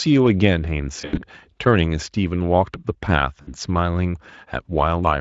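From 1.01 to 1.23 s the speech smears into a buzzy tone or a coloured noise that fades and then recovers weakly, and a shorter, similar smear follows at 3.41 to 3.57 s. Both are VoIP packet loss concealed by the speech codec, here Speex at 27.8 kbps with only light wear of its own. The first stretch lost about 120 ms of audio scattered across 160 ms, including one 80 ms gap. The second lost about 60 ms.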